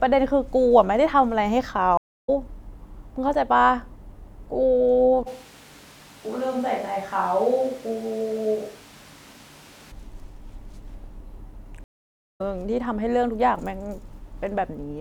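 A speech clip with two stream reconnects and one stretch on a distant microphone. At 1.97 s the audio goes silent for about 0.28 s and resumes at 2.29 s. At 11.84 s a longer gap of about 0.53 s ends at 12.41 s. Each is a stream reconnect: the connection dropped, the player reconnected and started a fresh decoder mid-stream, so the first frames fade in. Unlike an ordinary packet-loss dropout, playback does not pick up where it stopped. It skips ahead by roughly 0.2 s the first time and roughly half a second the second time, so some speech is lost rather than delayed. From 5.28 s to 9.90 s the sound abruptly turns roomy and hollow, with thinner bass and room noise rising to roughly 25 dB below the speech, then snaps back just as suddenly. This is a switch to a distant microphone, likely because the close mic's signal failed or was dropped and a farther pickup such as a camera mic took over. 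The loudness stays about the same, so this is not a gain change. The hard in-and-out edges and the raised noise floor set it apart from reverb or EQ applied to the close-mic signal, which would not bring in extra room noise.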